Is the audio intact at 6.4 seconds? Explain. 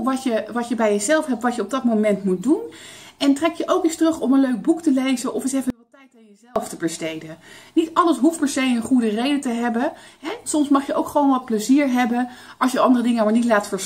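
No, 6.4 seconds sits inside an audio dropout to a faint residue that runs from 5.70 to 6.56 s, so you lose about 0.85 s. The sound cuts out abruptly rather than fading, and all that's left in the gap is a faint trace of it, roughly 30 dB below its normal level. The likely cause is the wanted signal getting lost while the path after the break stayed live, letting that low residue through until things snap back.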